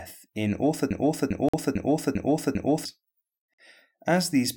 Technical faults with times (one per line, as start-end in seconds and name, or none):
0.91-2.85 broken-record loop
1.49-1.53 gap between chunks
3.54-3.58 gap between chunks